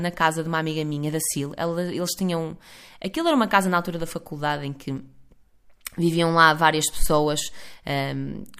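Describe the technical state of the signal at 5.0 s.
At 5.0 s the speech signal is intact, with no audible fault.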